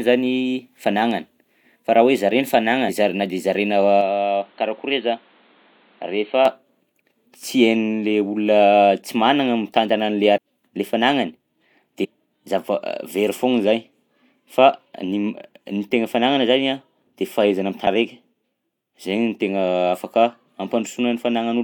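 At 2.88 to 2.90 s the speech breaks up briefly, for about 20 ms. This is damaged data in a compressed stream: the decoder hits corrupted frames, loses sync and hunts for the next valid frame header.

From 4.01 to 6.45 s the tone turns dull and boxy, with nothing above 4.4 kHz. The level sits a few decibels lower, and a faint new background noise appears well beneath the speech. Both changes arrive instantly, with no gap at the switch. The cause is likely an input switched to a poorer device, such as a narrower-band microphone or a headset call profile. A filter or equaliser change would not bring its own noise floor and level shift, and that distinguishes the two.

The same compressed-stream damage returns at 10.36 to 10.38 s, 12.03 to 12.05 s and 17.86 s. Each is a short blip. These are far too brief to be a device change.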